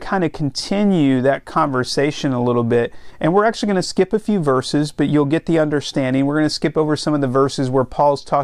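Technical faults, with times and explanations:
Nothing stood out as a technical fault on listening to this speech recording.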